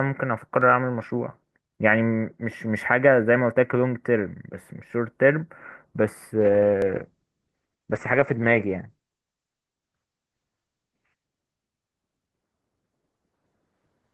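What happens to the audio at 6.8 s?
At 6.82 s there is a tiny skip forward in the speech, as if a sliver a few milliseconds long has been cut out and the two edges butted together. Nothing goes silent; the sound simply jumps. This is most likely a dropped buffer (overrun): the software failed to read its input samples before the hardware overwrote them, so that short block was lost and the audio on either side was joined directly.

That skip lands inside a longer stretch of degraded quality running from 6.41 s to 12.23 s. Across that span the speech turns muffled and rough, losing its crisp top end. This is a call bitrate drop: the encoder's target fell from 32 kbps to 10 kbps, holding at the lowest rate for 4.5 s. With so few bits the codec quantises more coarsely and narrows the audio band from 20 kHz down to 8 kHz, which accounts for the dull, grainy sound until the rate recovers.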